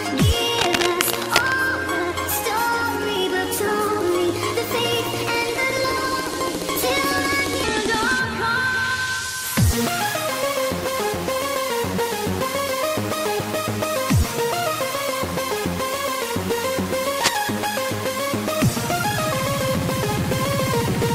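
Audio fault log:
0.58–1.54 s and 17.19–17.49 s, cable scratch noise: dense, ragged bursts of scratching and rustling sit over the sound. The first burst lasts nearly a second at about the same level as the signal. The second is shorter and about 5 dB below it. The likely cause is a worn cable, connector or control being moved, so its contact resistance jumps rapidly and injects uneven noise into the signal path.
7.64–9.64 s, section at the wrong speed: for two seconds the sound turns deeper and slower, dropping roughly three semitones before snapping back to normal. Speed and pitch fall together because this stretch plays at 0.822 times its recorded rate. That points to an editor or player likely running this section against the wrong clock, which stretches it in time and lowers every frequency by the same ratio.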